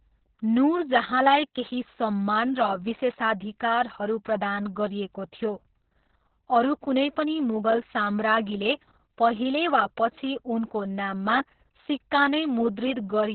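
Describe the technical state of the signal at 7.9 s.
At 7.9 s the speech is under heavy Opus voice compression, which runs through the whole clip. The codec's SILK linear-prediction mode has narrowed the band to telephone width, leaving nothing above about 4.2 kHz, and codes the excitation coarsely, which points to a bitrate near 6 kbps with long 60 ms frames. The result is muffled, hoarse and faintly robotic. A plain low-pass filter would dull the top without adding that rough, buzzy texture to the voice.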